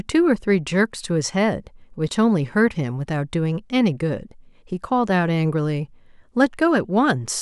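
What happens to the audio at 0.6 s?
Nothing goes wrong at 0.6 s; the speech plays through that moment intact, with no dropout, click or distortion.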